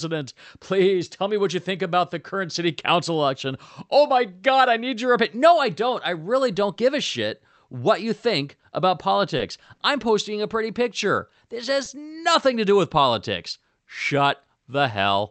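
At 9.37 to 9.41 s, right after "what you think about", there is a short stall from a late packet. The jitter buffer ran empty, so the last sound is held about 20 ms too long before playback resumes.

At 11.84 to 11.88 s, just before "nothing to do with", comes a short concealed packet loss. About 20 ms of audio never arrived. The receiver continued the preceding sound to fill the gap, which is heard as a brief smear.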